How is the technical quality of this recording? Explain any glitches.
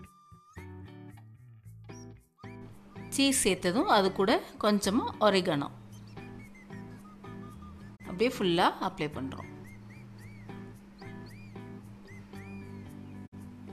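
The recording has two short digital broadcast dropouts, one at 7.95 to 8.01 s and another at 13.25 to 13.34 s. In each, the receiver stopped getting usable frames and muted until valid ones resumed. The audio fades out over about 20 ms, sits in silence, then comes back. The gaps correspond to roughly 24 ms and 48 ms of lost material, which fits one and then two missing frames. Unlike a cable or contact fault, there is no crackle or click. Unlike streaming concealment, nothing is repeated or smeared. There is just a clean, faded hole.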